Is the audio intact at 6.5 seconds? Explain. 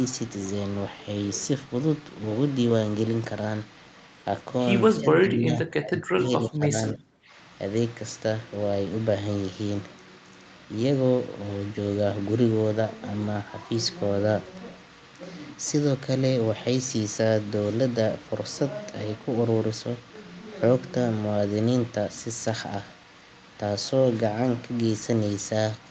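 No. From 6.41 to 6.75 s the speech drops by about 15 dB, likely speech suppressed in double talk, where the echo canceller mistook the talker for echo.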